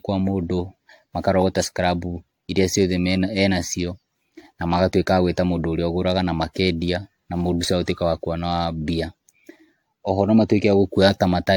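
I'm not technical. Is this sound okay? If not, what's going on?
No. Generation loss runs through the whole recording, from start to finish. The speech sounds swirly and hollow, with a watery smear around it, and the starts of sounds are blurred rather than crisp. This is likely because the recording was saved in a compressed format, opened and saved again about ten times. Each save throws away slightly different detail, so the small losses pile up into this washed-out, phasey quality.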